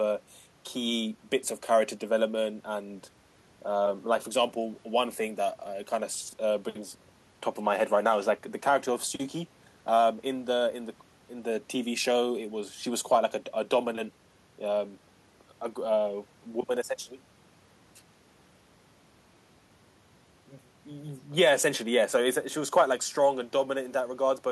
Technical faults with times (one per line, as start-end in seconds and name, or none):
none